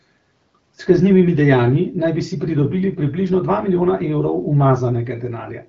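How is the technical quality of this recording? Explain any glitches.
The technical quality holds up, and there are no glitches to explain.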